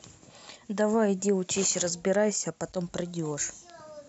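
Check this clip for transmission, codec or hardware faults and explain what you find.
Nothing to flag: no faults are audible anywhere in the speech.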